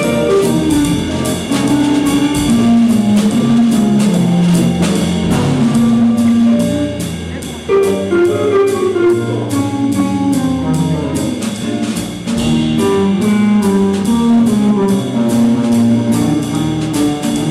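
Hard clipping runs through the whole recording. The signal was driven about 7 dB beyond what one stage could pass, so every peak that crossed the ceiling was sliced off flat. Only a small share of the samples, around one in twenty, sit at that limit. The result is a gritty crackle riding on each loud moment. On a waveform the tops appear as squared-off plateaus. A spectrogram shows broadband vertical smears of added harmonics reaching high into the kHz range at each peak.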